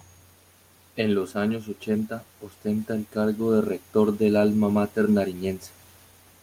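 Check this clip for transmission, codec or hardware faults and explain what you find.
Nothing stood out on listening to this speech.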